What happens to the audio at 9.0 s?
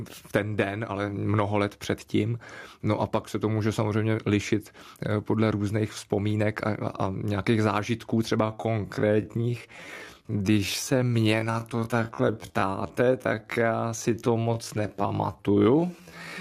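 At 9.0 s the speech is in a time-stretched section running from 8.38 s, just before "protože u mě ta", to the end at 16.4 s. It drags to about 0.61 times its pace, with the pitch unchanged, likely from software repeating short pieces to lengthen it.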